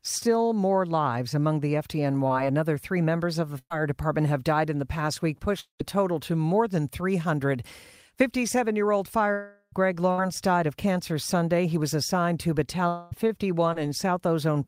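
From 2.27 to 5.81 s, just after "more lives among the", packets were repeatedly lost or arrived too late: three separate gaps, the longest 190 ms, about 340 ms missing in all. This is repeated packet loss, and it gives the robotic sound. Each time, the receiver stretches the last bit of sound to cover the hole, so the speech turns choppy and mechanical, with pieces dropping out across the stretch.

At 9.33 s, right after "year old", about 400 ms of audio likely never arrived, which points to a long network dropout lasting until 9.74 s. The receiver carries the last sound forward as a fading buzz that covers almost the whole gap and then leaves a short silence of about 80 ms. The speech resumes further on, and that stretch is simply gone.

From 10.12 to 10.2 s, a burst of packet loss took out about 60 ms, a few packets in a row. The decoder bridges the hole by holding the preceding sound and lowering its level as the gap runs on. 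The result is a brief held buzz or dying hiss, and the speech picks up again slightly ahead of where it left off.

From 12.88 to 13.13 s, another long network dropout likely removed about 240 ms. This time the concealment covers the entire gap with no silence, so the sound is a single stretched, decaying continuation of the previous sound that runs straight into the returning speech. The missing audio is not recovered.

From 13.73 to 13.77 s, a short concealed packet loss, about 20 ms that missed the decoder's deadline, is patched by extrapolating from the sound just before and blending back in. It is heard only as a tiny smear or wobble in the speech.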